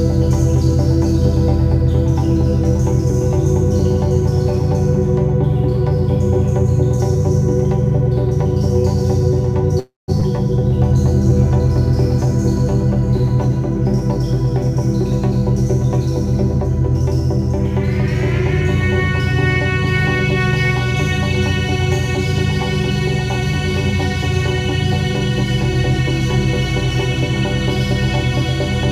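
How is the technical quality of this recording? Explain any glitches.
The recording has three linked glitches, clustered between about 9.8 and 13.5 seconds.

From 9.79 to 10.10 s there is a call audio freeze. Packets were likely held up in transit, and the jitter buffer ran dry. The receiver stretched the last sound into a fading buzz, which then dropped to silence for about 170 ms. In all, 286 ms of filler was inserted. When the packets arrived, the audio resumed where it had stopped. Nothing was lost, but the playback delay grew by 286 ms.

At 10.20 to 10.23 s the audio skips ahead. A stretch of roughly a fifth of a second was discarded, which cancels most of the extra delay the freeze had built up. Only about 12 ms of filler covers the seam. The two sides of the cut are joined almost directly. The sound therefore jumps forward abruptly, with part of it simply missing.

From 10.60 to 13.49 s there is a jitter buffer slow-down. 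The buffer was short of reserve, so the receiver repeated tiny pieces of the waveform to gain time. Across these three seconds it added 57 ms. Playback runs at about 98 percent speed with unchanged pitch. The result is a slight drag, with sounds a little drawn out and possibly a faint warble.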